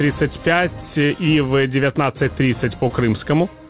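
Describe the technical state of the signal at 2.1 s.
At 2.1 s the signal is intact, carrying only the narrowband character of the call path, with nothing above 4 kHz, which fits a G.711 telephone codec.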